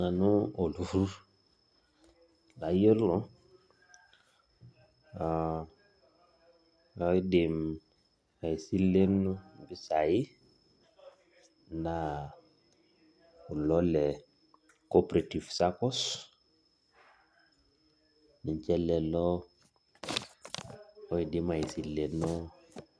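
It's a speech recording, and there's nothing technically wrong with it that a careful listen turns up.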